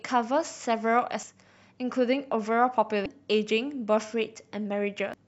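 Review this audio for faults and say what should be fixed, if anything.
Damaged data in a compressed stream at 1.23, 3.06 and 5.14 s: corrupted bytes make the decoder lose frame sync, producing a brief chirp, squawk, click or short hole while it hunts for the next header. Deliver the file over a checksummed, error-corrected transfer and verify its integrity before decoding.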